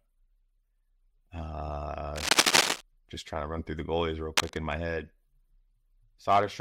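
Two bursts of scratchy, rustling noise break over the sound: the first from 2.16 to 2.81 s, sitting about 5 dB above the signal, and a shorter one from 4.37 to 4.59 s at roughly the same level as the audio. This is cable scratch noise, likely from a worn cable, connector or control being moved, so its contact resistance fluctuates rapidly and injects dense, irregular crackle into the signal path.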